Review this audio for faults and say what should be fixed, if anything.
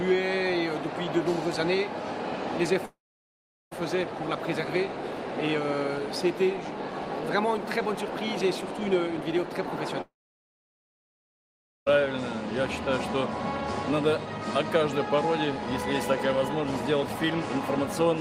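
Audio fades out and goes silent from 2.85 to 3.73 s and from 10.01 to 11.92 s, then resumes with that stretch gone. This is likely a long network dropout. Unlike a simple mute, the sound returns further along rather than where it stopped. Use a more robust network path with a deeper jitter buffer or redundancy to prevent it.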